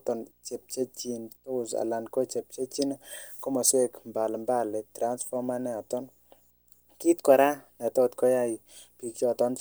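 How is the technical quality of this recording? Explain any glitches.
The speech carries one persistent fault. Throughout, a quiet buzz at 59.94 Hz with hash above it and a faint 15.7 kHz whine sit well below the voice: video or display buzz from a screen or video cable coupling into the audio.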